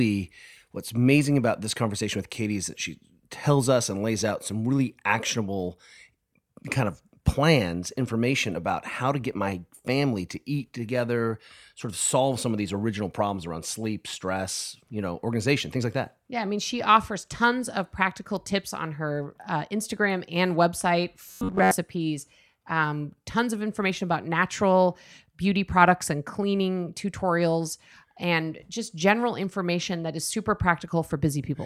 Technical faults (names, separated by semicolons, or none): robotic sound from repeated short buffers